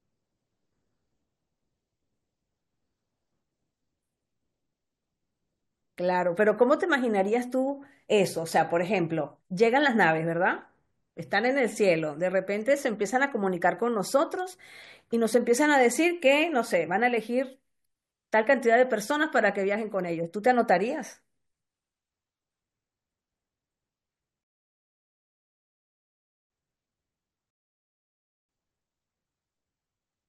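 At 24.44 s the speech drops into silence for about 2.1 s, then picks up at exactly the point where it broke off, and at 27.50 s the same thing happens again for about 1.0 s before resuming at 28.49 s. Both gaps are a rebuffering stall: playback consumed all the downloaded audio and paused until more data arrived. Nothing is skipped, but roughly 3 s of dead air is added to the timeline.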